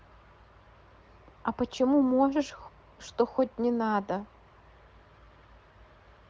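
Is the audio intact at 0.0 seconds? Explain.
Yes, at 0.0 seconds the speech is intact, carried by the AMR wideband (HD Voice) codec at 18.25 kbit/s, a rate high enough that the coding leaves at most faint traces.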